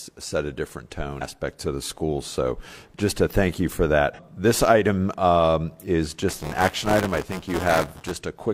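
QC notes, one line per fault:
1.16–1.22 s and 4.14–4.19 s, damaged data in a compressed stream: a short glitch after "set a different" and after "a thank you for", as the decoder loses sync and hunts for the next frame.
6.28–8.12 s, buffer tearing: a robotic 188 Hz rattle starting after "this item um is", which fits a 256-sample buffer. About a tenth of each buffer replays audio roughly 15 ms old, with hard joins. Unlike mains hum, it follows the signal and stops in gaps.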